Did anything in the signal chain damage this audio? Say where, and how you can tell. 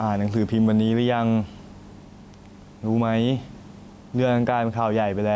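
Yes. Gain pumping runs through the whole clip. Loud and soft syllables of the speech end up closer in level, so it sounds squashed. The gain swings by around 5 dB. The likely cause is an input gain set far too high for the microphone, with a fast limiter or compressor clamping down on every peak and releasing in the gaps.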